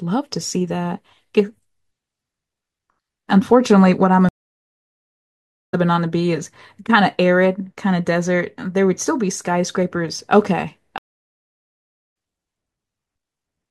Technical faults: stream reconnect

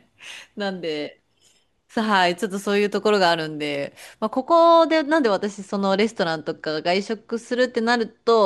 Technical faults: channel delay (comb filtering)

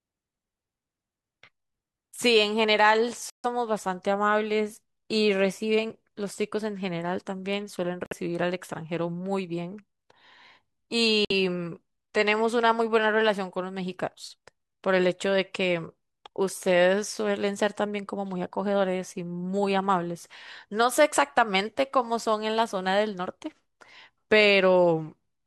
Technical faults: Bluetooth stall

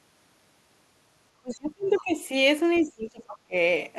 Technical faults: speech suppressed in double talk; other side's voice leaking through

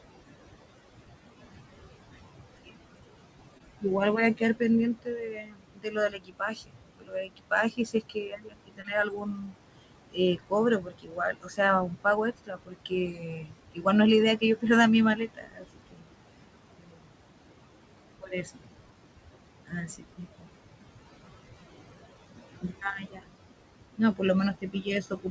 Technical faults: noise suppressor artifacts; short concealed packet loss; speech cut by the noise suppressor

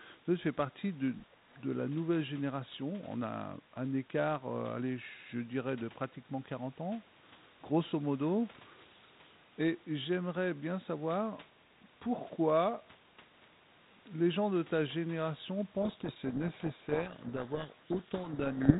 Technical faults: speech suppressed in double talk; codec payload misread

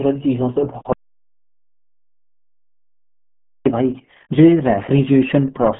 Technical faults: RealAudio 14.4 codec; audio dropout to silence

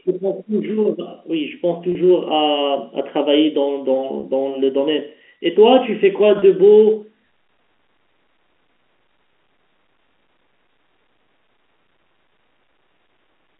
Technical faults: packet loss with pitch repetition

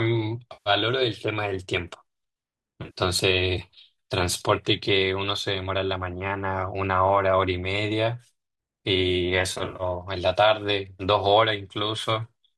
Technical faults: AAC frame loss with concealment

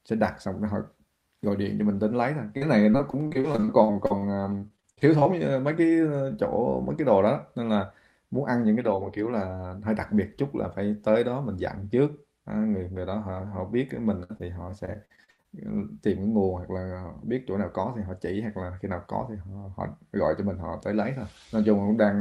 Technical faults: repeated packet loss (robotic sound); burst of packet loss; short concealed packet loss

